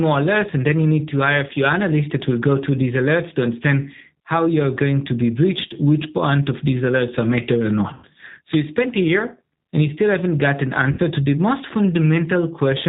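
The whole clip carries the sound of the G.729 codec, a low-rate speech coder. It rebuilds the voice from a vocal tract filter, a pitch predictor and a few pulses per frame. The damage is plainly audible: rough, slightly synthetic speech with no content above 4 kHz. That fits 8 kbit/s G.729A.

At 7.94 to 8.06 s, between "alerts are matter or" and "so you spent a", there is VoIP packet loss concealed by the speech codec. About 90 ms is missing, which fits three lost packets. The decoder stretches the last pitch and filter into a fading buzzy tone or coloured noise. At 10.92 to 11.00 s, between "still haven't got an" and "to the most", a second gap of about 60 ms does the same. Speech stays weak briefly after each gap.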